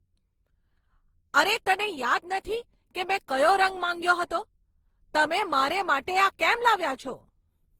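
Throughout the speech, the sound is swirly, smeared and hollow. Consonant attacks blur rather than landing cleanly. Content stops at about 20.3 kHz. The damage is heavier than a single Opus pass at a rate like 48 kbit/s would leave. The likely cause is generation loss: the audio was decoded and re-encoded about ten times. Each pass quantised on a shifted frame grid, so noise piled up.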